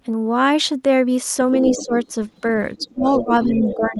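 An echo canceller that likely failed to remove the far end's loudspeaker sound lets a second voice leak in from 1.53 to 2.12 s, sitting roughly 10 dB under the talker. Inside that stretch, from 1.72 to 1.94 s, the same canceller likely mistakes double talk for echo and turns everything down, so the main speech dips by around 10 dB for about a fifth of a second. Faint leakage of the other side's voice returns at 2.29 to 2.41 s, very low at around 35 dB down, and again at 2.76 to 2.93 s at around 25 dB down. From 2.79 to 3.51 s speech suppressed in double talk is deeper, sinking by up to about 20 dB in pieces totalling around 400 ms. The other side's voice leaks through more strongly from 3.09 to 3.77 s, about 10 dB below the talker. From 3.74 s to the end the talker is again pulled down in double talk, by up to roughly 15 dB over about 300 ms.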